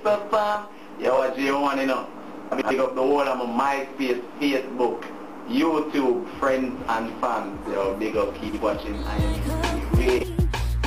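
Frames out of order occur at 1.15–1.21 s, 2.51–2.71 s, 8.48–8.59 s and 10.18–10.24 s. At each point, two adjacent blocks of roughly 23, 93, 46 and 23 ms were decoded swapped, producing a brief garbled flutter. No time is lost.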